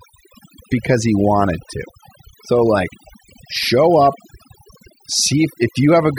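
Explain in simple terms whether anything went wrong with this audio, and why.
Overdone noise removal runs throughout this speech: the cleanup was set too strong, shutting off quiet frequency bands, leaving twinkling specks in near-silence.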